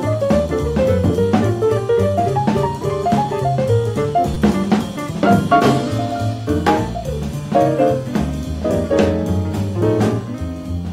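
A repeated buffer at 4.34 s: new audio arrived late, so a 5.8 ms piece played three extra times, which fits a 256-sample buffer. It is heard as a brief buzzing click.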